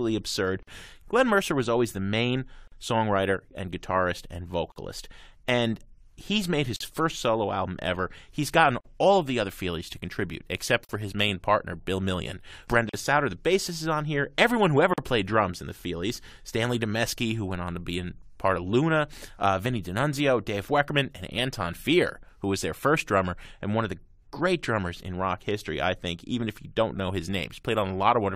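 Gaps at a join of encoded pieces open at 0.63 s (about 48 ms), then 2.68, 4.72, 6.76, 8.81, 10.85, 12.89 and 14.94 s (about 43 ms each), every 2.0 s. Each is encoder start delay and end padding left in at the joins. Unlike a dropout, the speech resumes exactly where it stopped.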